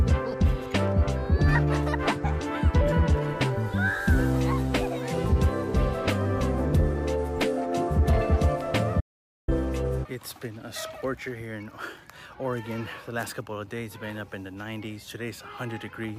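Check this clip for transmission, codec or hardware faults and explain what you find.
One fault stands out: an audio dropout to silence from 9.01 to 9.48 s. The sound cuts off abruptly and resumes after about 0.47 s of silence, with no room tone underneath. The likely cause is the input signal being lost briefly, through a disconnection or mute, while the recorder kept writing silence, so that stretch of audio is gone.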